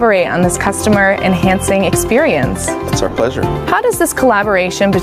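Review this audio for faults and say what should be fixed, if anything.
Gain pumping runs through the whole clip. The gain is pulled down under each loud moment, so the level breathes against the material. Loud and soft passages sit unnaturally close together and everything feels squashed, with a swing of around 15 dB between ducked and recovered levels. The likely cause is input gain set far too high for the microphone, with a fast limiter or compressor clamping down on every peak. Prevent it by lowering the input gain so the limiter rarely engages, or by slowing its attack and release.

Lost LE Audio frames disrupt the sound between 3.07 and 3.17 s. Over those 90 ms, any tonal content turns into a brief noisy smear. This happens because dropouts totalling 60 ms are scattered through the span, with no single run longer than about 20 ms. That pattern fits several 7.5 ms LC3 frames going missing. 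For each lost frame, the decoder fills the gap by repeating the last spectrum with randomised signs, which destroys the pitch structure and leaves a hiss-like patch, and the concealment fades as a run of losses continues. Prevent it by improving the Bluetooth link, for example by reducing distance and interference or adding retransmission headroom.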